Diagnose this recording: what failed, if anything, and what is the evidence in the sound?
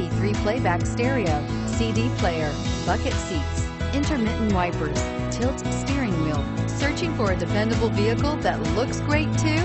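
Nothing in the recording points to a failure at any stage of the chain. No stage stands out for diagnosis, so there is no evidence to tie to a time or a mechanism.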